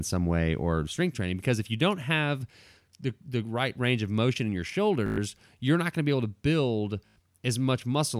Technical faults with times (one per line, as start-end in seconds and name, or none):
5.06-5.18 Bluetooth stutter
7.07-7.16 Bluetooth stutter